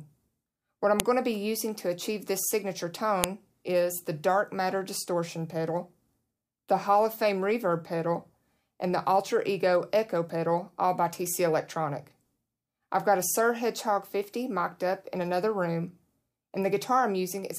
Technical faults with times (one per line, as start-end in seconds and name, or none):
1.00 file header played as audio
3.24 file header played as audio